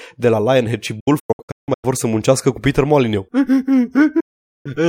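Speech, hit by digital broadcast dropouts: the receiver mutes in quick-fading holes at 1.00–1.85 s, just before "să muncească cu", then again at 4.20–4.66 s.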